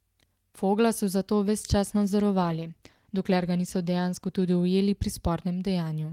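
From 1.96 s to 4.77 s the speech turns coarse and watery, with the roughest stretch lasting about 2 s before the detail returns. This is a call bitrate drop: the connection's bandwidth estimate fell, so the encoder was given far fewer bits and had to code the signal more crudely. The change in quality fits a fall from around 32 kbps to about 18 kbps, which then recovered toward the end of that span.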